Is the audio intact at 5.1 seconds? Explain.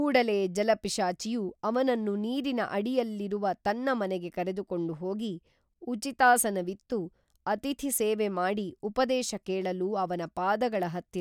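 Yes, the audio is intact at 5.1 seconds, with no fault audible at that moment.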